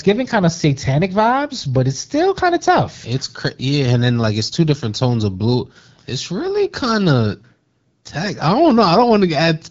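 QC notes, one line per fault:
Nothing stood out on listening to this speech as carried over the AMR wideband (HD Voice) path.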